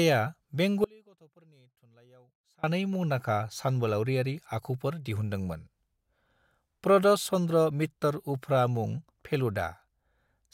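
A likely signal break upstream of a live path causes an audio dropout to a faint residue, 0.84–2.64 s: abrupt faint leak until "मुंदांखा सानबोलावरियारि".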